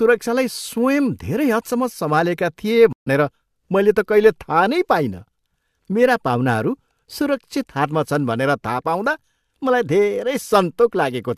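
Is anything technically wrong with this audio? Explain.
Yes, there's a stream reconnect in this speech. From 2.93 to 3.08 s the audio drops out for 136 ms, because the connection broke and the player restarted its decoder mid-stream. When the speech comes back it has jumped ahead by about a tenth of a second, so a small piece is simply missing.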